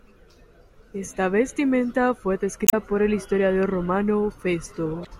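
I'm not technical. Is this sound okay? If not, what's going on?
No. The speech has two short bursts of damaged data in a compressed stream. The first runs from about 2.65 to 2.74 s, right after "vestimenta fue" and before "por el historiador". The second comes near the end, from 5.02 to 5.07 s. Part of the compressed file was corrupted, so the player lost its place. You hear a brief glitch at each spot.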